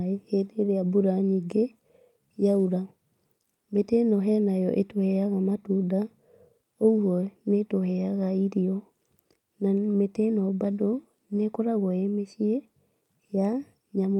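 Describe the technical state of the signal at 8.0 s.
At 8.0 s the speech signal is intact, with no audible fault at that moment.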